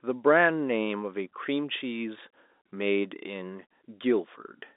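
Speech heard through G.711 telephone coding, with nothing above about 3.8 kHz, and nothing technically wrong with it.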